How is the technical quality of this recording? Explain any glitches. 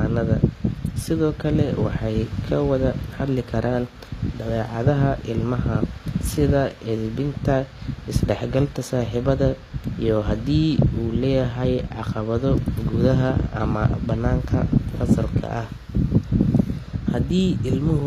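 The recording is clearly degraded, with audible coding damage throughout. Across the whole speech clip, treble sounds gritty and lispy, likely from HE-AAC compression, consistent with roughly 24 kbps. Copied upper bands leave mismatched harmonics and a hard spectrogram ceiling near 14.9 kHz.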